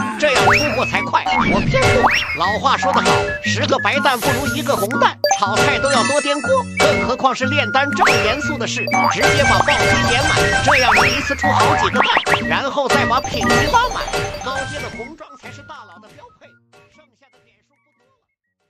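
No technical faults are audible, and the only level change is a smooth, editor-style fade-out that begins around 13.5 s and reaches silence at 18.7 s without any click or hard edge.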